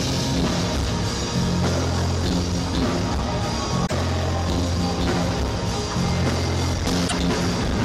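Damaged data in a compressed stream disrupts the audio from 3.83 to 3.92 s and again from 7.07 to 7.13 s. Corrupted bytes in the encoded stream left the decoder unable to read those frames, so it lost sync and had to hunt for the next valid frame header.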